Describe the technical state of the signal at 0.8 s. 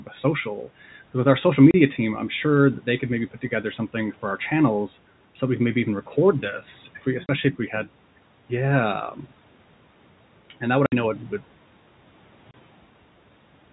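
At 0.8 s the speech signal is intact, with no fault in the audio at that moment beyond its normal passage through call microphone processing, a bed of room noise about 25 dB below the speech, and G.711 telephone coding.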